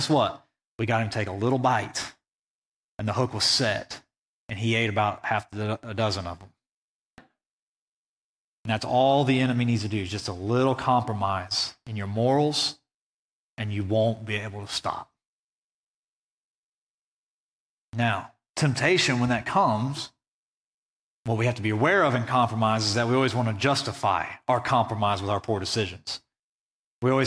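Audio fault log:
No technical faults are audible anywhere in the speech recording.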